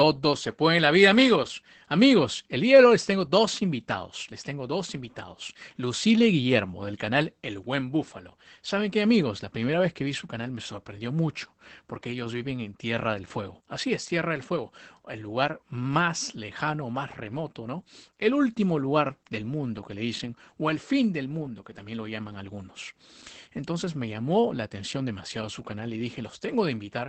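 A speech clip with Opus voice compression throughout. The top of the band is missing. Nothing reaches above about 8 kHz, so the speech sounds muffled and lacks air. The voice also has a hoarse, slightly robotic edge. That comes from the SILK coder's linear-prediction model describing the excitation coarsely. The damage is plainly audible from start to finish. This level of degradation fits a low bitrate of around 12 kbps in wideband mode.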